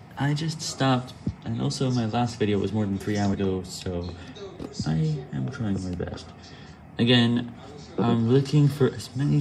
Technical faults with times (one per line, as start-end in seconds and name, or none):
3.33 compressed frames skipped